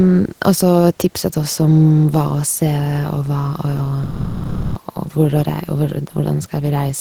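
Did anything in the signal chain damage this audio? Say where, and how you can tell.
Yes. From 4.03 to 4.75 s the speech gives way to steady comfort noise. This is likely sound dropped by the voice detector, when the codec's DTX stopped transmitting.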